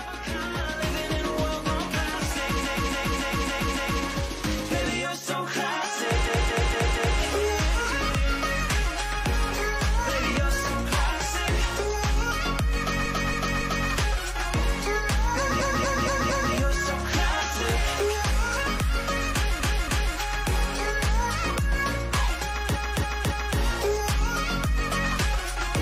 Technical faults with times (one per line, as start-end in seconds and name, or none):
2.60-4.00 repeated frames
6.23-7.16 repeated frames
13.01-13.84 repeated frames
15.56-16.49 repeated frames
19.55-20.11 repeated frames
22.71-23.55 repeated frames